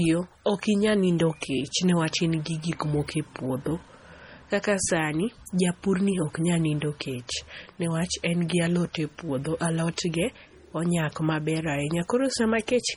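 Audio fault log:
throughout, MP3 compression: heavy watery, swirly artefacts, metallic chirps on s sounds and smeared attacks. The likely cause is a bit-starved MP3 encoder, fitting roughly 32 kbps, zeroing weak frequency lines that flicker between frames, though content still reaches 20.6 kHz.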